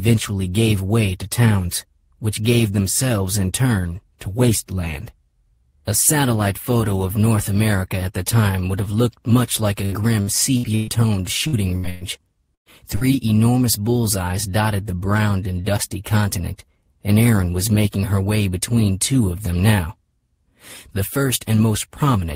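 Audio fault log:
9.85–10.90 s: repeated packet loss (robotic sound). Four closely spaced gaps, the longest 121 ms, are patched with about 300 ms of continued sound, giving choppy sound with pieces missing rather than isolated dropouts.
11.47, 11.77, 11.89, 12.55 and 12.96 s: burst of packet loss. Each is a single 52–113 ms hole filled by a held, fading continuation of the preceding sound, and the one at 12.55 s dies away to silence. Each ends as the audio resumes further on, unlike the rapid, robotic chain before it.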